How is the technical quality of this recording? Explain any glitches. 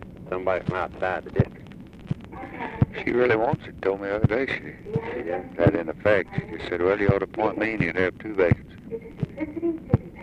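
Nothing stood out on listening; there are no glitches to explain in this recording.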